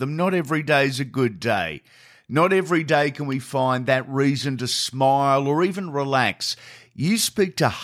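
At 3.32 s a single sharp snap cuts across the speech, peaking moderately at around -25 dBFS. It is most likely an electrical switching spike, a brief arc from nearby equipment induced into the line, showing as a needle-thin waveform spike and a full-height vertical stripe on the spectrogram.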